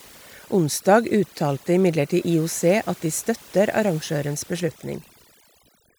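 Overdone noise removal runs through the whole recording. A noise reduction stage set far too aggressively drops individual frequency bands whenever they come near its noise estimate, taking quieter parts of the voice along. The background collapses into near silence flecked with twinkling specks.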